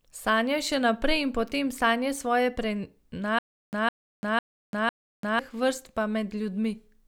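From 3.39 to 5.39 s the stream likely stalled, producing a stutter with silent gaps: one 158.5 ms burst repeats four times, separated by digital silence.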